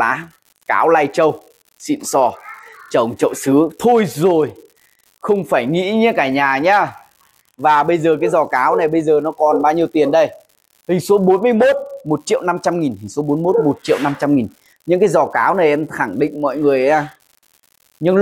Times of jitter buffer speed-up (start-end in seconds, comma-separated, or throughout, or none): none